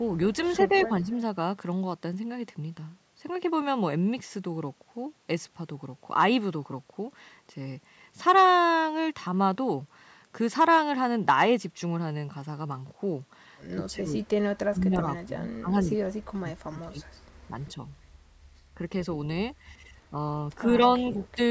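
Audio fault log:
0.46–0.52 s and 0.72–0.86 s, echo leak: brief, faint ghost copies of the speech trail the original by 135 ms, sitting roughly 25 to 30 dB below it. This is likely a loudspeaker echo that the far end's canceller failed to remove fully and sent back.
0.68–0.89 s, 13.75–17.07 s, 20.11–20.15 s, 20.98–21.18 s, 21.35–21.39 s, speech suppressed in double talk: the speech dips in short pieces, mostly by a few dB. Across 13.75–17.07 s it sinks much deeper, about 25 dB, for around two seconds in total. This is likely an echo canceller turning down both sides during overlapping talk.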